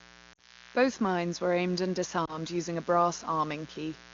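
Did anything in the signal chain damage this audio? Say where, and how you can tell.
Yes, two kinds of damage. The first is mains buzz in the analogue wiring, present for the whole clip. It's a steady, raspy buzz built on 60 Hz with a stack of harmonics climbing well up into the kilohertz range, sitting roughly 25 dB under the speech. That gritty edge comes from sharp switching spikes, twice per mains cycle, probably from a dimmer, rectifier or an unshielded run picking up the supply.

The second is lost AMR speech frames on the network leg. From 0.34 to 0.67 s the decoder covers a gap of about 40 ms, which fits two lost 20 ms frames. It reuses the last good sound with falling gain and drops it to near silence, then the speech comes back rough for a moment. At 2.25 to 2.37 s there's a shorter warble covering about 20 ms, consistent with a single lost frame. The wideband codec carrying all this sounds like a high-rate mode.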